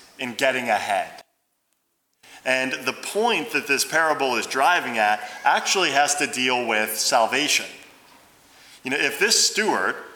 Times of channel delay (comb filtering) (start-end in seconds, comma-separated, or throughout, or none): none